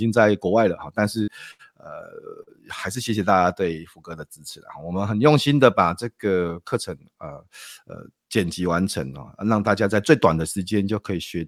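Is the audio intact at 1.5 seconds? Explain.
No. From 1.51 to 1.62 s there is a burst of packet loss. Several packets in a row never arrived in time, so the receiver extended the last speech it had and faded it down for about 76 ms. The speech then resumes with about 80 ms gone. Unlike a plain dropout, the gap isn't silent. It is bridged by a stretched, fading sound, and then the speech jumps ahead.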